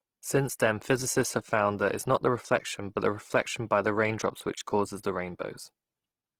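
A speech recording with plainly audible Opus compression throughout. Instead of swirling, the voice turns rough and grainy, with a noisy hiss in place of clean harmonic detail. The likely cause is Opus coding in its music (CELT) mode at a low rate, which fits roughly 16 kbps with fullband bandwidth kept. On a spectrogram the upper bands stay filled rather than showing holes, but with a diffuse noise texture where crisp harmonic lines should be.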